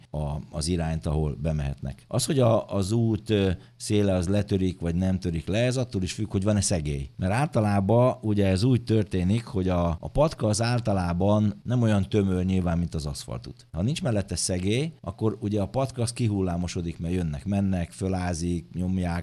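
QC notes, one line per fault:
No faults heard anywhere in this audio.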